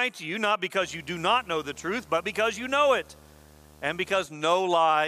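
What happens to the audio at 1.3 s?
At 1.3 s the speech sits under a video or display buzz running from 0.81 to 4.26 s: a screen or video cable leaking into the audio path, giving a harsh 75 Hz buzz with hash above it, roughly 25 dB below the speech. Its 75 Hz pitch, off the 50 or 60 Hz mains grid, separates it from mains hum.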